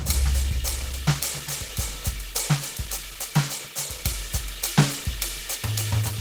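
Opus compression runs throughout this music clip, and the damage is plainly audible. Tones come out rough, grainy and noisy rather than swirling, and there is a hoarse quality to them. The likely cause is an encoder at a very low rate, around 16 kbps, in its hybrid mode. When bits run short it keeps each band's energy but fills the detail with folded or noise content. The top end still extends to about 20.2 kHz.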